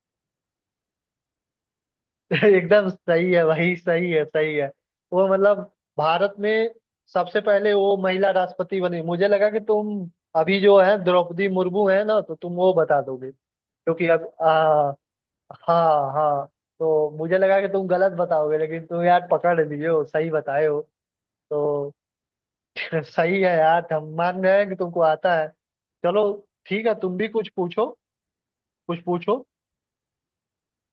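No technical faults are audible.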